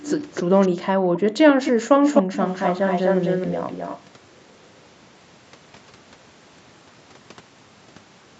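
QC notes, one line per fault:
0.0–4.02 s, echo leak: A delayed copy of the speech returns, roughly 0.28 s late at first and then about 0.25 s late. It comes as scraps at 0.0, 0.33, 0.61, 1.14 and 1.6 s, then as a long stretch from 2.04 to 4.02 s only a few dB under the speech. The likely cause is an echo canceller on a loudspeaker end that let part of its microphone pickup through.
0.72–1.46 s, background gated by the echo canceller: The room sound drops out for about half a second in total, dipping by as much as about 40 dB. This happens because the canceller pulled the microphone down hard while the loudspeaker played, then released it.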